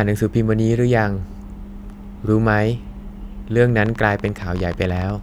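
A speech recording carrying a train of clicks from 3.86 s to 5.11 s, near the end of the clip. Around twenty short, similarly shaped pulses arrive at about 13.8 per second with uneven spacing, each peaking roughly 5 dB above the speech, so they read as a ragged ticking laid over the voice and any gaps. The likely cause is electrical interference from nearby equipment or a faulty connection or power supply injecting repeated impulses.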